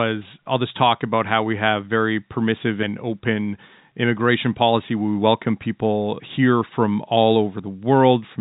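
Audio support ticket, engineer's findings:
No faults found.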